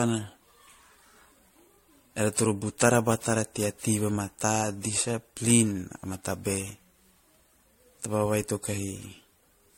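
Right from the start and all the way through, the speech has that swirly, hollow, smeared quality of generation loss, most likely from being run through MP3 again and again, something like seven passes at around 70 kbit/s. Each re-encode quantises on a shifted frame grid, so the holes and noise stack up, consonant attacks go soft, and the top end stops dead at about 16.5 kHz.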